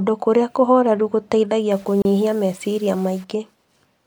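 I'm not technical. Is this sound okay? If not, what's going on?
No. From about 1.71 to 3.24 seconds the speech turns grainy and gritty, with a rough fizz that follows the voice and is harshest in the quiet parts. The likely cause is low bit depth without dither: the sound was stored with very few steps, consistent with roughly 7 bits, and rounded off crudely.

At 2.02 seconds, inside that grainy stretch, the sound briefly drops out for about 31 milliseconds, a tiny hiccup, then carries on where it left off. This is a gap at a join of encoded pieces: the audio was compressed in separate chunks and stitched together, and a little silence from the compression was left at the seam.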